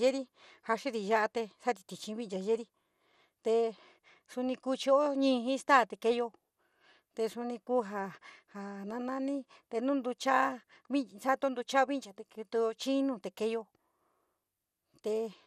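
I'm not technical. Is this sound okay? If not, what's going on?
No. MP2 compression damage runs through the whole recording, from start to finish. The speech sounds dull and muffled, with a gurgling, grainy roughness behind it. The likely cause is the MP2 format squeezing the file too hard. That format splits sound into many narrow slices, and when it runs short of space it drops the brightest slices and stores the rest crudely. Slices dropping in and out make the watery, bubbling texture.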